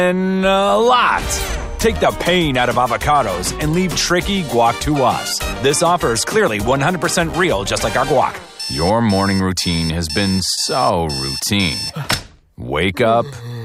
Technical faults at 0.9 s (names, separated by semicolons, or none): none